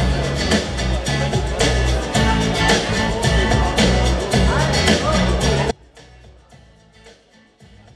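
At 5.71 s the audio drops out abruptly and never comes back, leaving only a faint residue of the sound, roughly 30 dB below its normal level, right to the end. The likely cause is a lost feed upstream while the downstream path stayed live.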